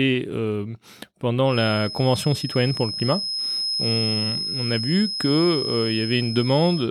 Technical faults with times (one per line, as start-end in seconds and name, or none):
1.44-6.91 feedback whistle